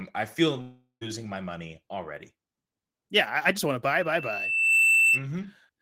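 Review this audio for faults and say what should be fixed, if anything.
From 0.61 to 1.03 s, just after "I feel", the sound smears into a fading buzz, then briefly goes silent before resuming at "my money already" with audio missing. This is likely a long network dropout: about 0.4 s of packets never arrived, and the receiver filled the gap. A more robust transport with a larger jitter buffer and packet-loss protection would prevent it.

From 3.93 to 5.26 s, after "I just want to", a single 2.7 kHz tone swells over roughly 0.7 s into a squeal sitting about 10 dB above the speech. This is loudspeaker feedback squeal: the microphone is re-amplifying its own loudspeaker at that frequency. Moving the microphone away from the speaker, lowering gain or notching 2.7 kHz would prevent it.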